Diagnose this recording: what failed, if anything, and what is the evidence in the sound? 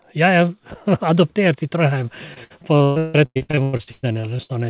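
What failed is the network. From 2.34 s to 4.51 s there's repeated packet loss, giving that choppy, robotic sound. There are 19 holes, the longest about 159 ms. Each one is patched by stretching the last bit of audio, so roughly half that stretch is concealed sound. The band tops out at 4 kHz, which fits a G.711 call leg.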